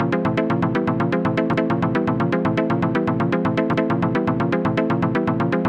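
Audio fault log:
1.54 to 1.74 s and 3.74 to 3.94 s, overlapping chunks: each 2.0 s processing chunk begins 200 ms before the previous one ends, so that stretch of sound plays twice, heard as a stutter at each join.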